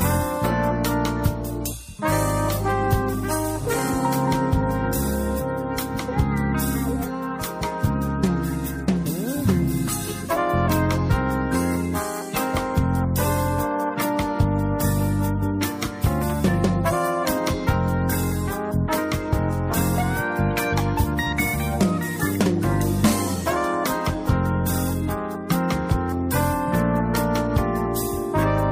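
No technical faults can be heard at any point in the audio; the signal stays steady and intact throughout.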